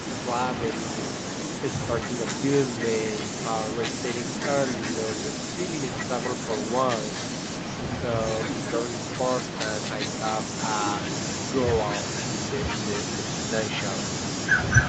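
From start to finish the speech carries echo with no canceller: the far end is playing the call through a loudspeaker, its microphone picks it up, and that copy returns after about a third of a second at roughly 9 dB below the original. Unlike room reverberation, which smears into a continuous tail, this is a distinct delayed repeat, quieter and thinner, trailing every phrase. Both copies share the codec's top limit at 8 kHz.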